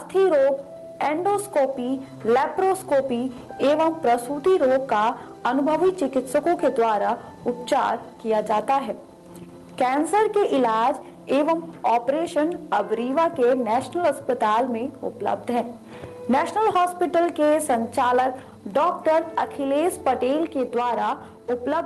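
From the start of the clip, clock drift between sender and receiver is present: the sender's clock runs about 4 percent slow relative to the receiver's. The jitter buffer keeps draining instead of holding steady, so playback can't stay fed at the sender's pace.

From 0.15 s to 21.7 s, the receiver makes repeated timing corrections, repeating short pieces to keep the buffer from running dry. These edits add up to roughly 0.7 s of extra material, and overall playback runs at 97 percent speed. They are unevenly spaced and come across as slight hiccups and a faintly dragging, unsteady tempo. The Opus call path, with its top end limited to about 12 kHz, carries this audio.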